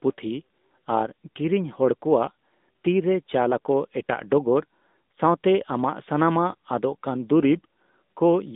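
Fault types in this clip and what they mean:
AMR narrowband mobile codec: This speech has passed through the 2G and 3G mobile speech coder. The coder rebuilds the voice from a vocal-tract model driven by a few pulses in each 5 ms slice. Here the band runs only from 200 Hz to 3.7 kHz. The top is cut off sharply and the low end sounds thin. The coding damage is plainly audible as a buzzy, synthetic edge, at a rate of 10.2 kbps. It lasts the whole clip.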